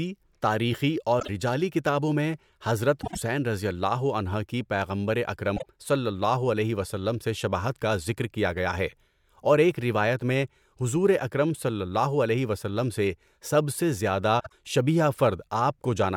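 Frames out of order hit this speech four times: at 1.20 s, after "کتابوں میں حضرت" at 3.02 s, between "کی پیغمبر" and "صلی اللہ علیہ وسلم" at 5.56 s, and after "سے سب سے زیادہ" at 14.40 s. Neighbouring 24 or 48 ms blocks play swapped, giving a brief garbled flutter.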